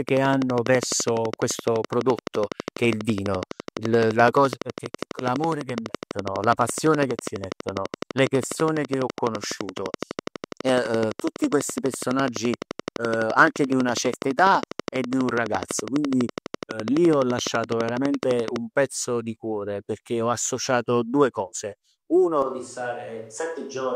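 From 0.09 s right through to 18.57 s there's a train of clicks ticking over the speech at a steady 12 per second, roughly 200 of them, all with much the same shape. They poke out well above the voice, peaking at about 15 dB over it, and they carry on through the pauses too. The train stops just before "pezzo di cuore perchè". Regular pulses like that most likely come from interference off nearby gear or a faulty connection or power supply.

At 22.42 s there's a switch to a distant microphone, and it holds until the end of the clip. The voice suddenly goes roomy and hollow and loses its low end. The level drops by about 5 dB, and the background noise comes up noticeably, sitting about 35 dB under the speech. That sudden change of character suggests the close mic likely dropped out, leaving something further away, like a camera mic, to carry the recording.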